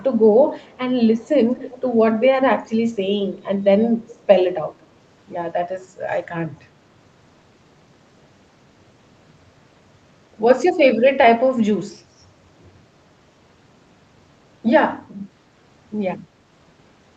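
Speech from a call, band-limited to about 8 kHz as the call codec path allows, with a faint delayed copy of the talker at 0.63–0.78 s, 1.55–1.81 s, 3.36–3.42 s and 4.07–4.23 s. This is echo leak: the far end's loudspeaker audio likely slipped past its echo canceller. Unlike room reverberation, which decays smoothly, each scrap is a distinct repeat lagging by a fixed 233 ms, far below the speech (about 20–35 dB down) and loudest at 1.55 s.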